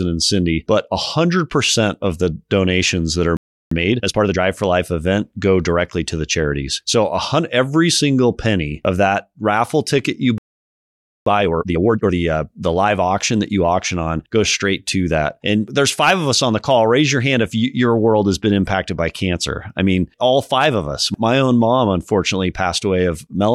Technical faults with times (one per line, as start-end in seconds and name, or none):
3.37-3.71 playback stall
3.71-4.39 time-compressed catch-up
10.38-11.26 playback stall
11.26-12.14 time-compressed catch-up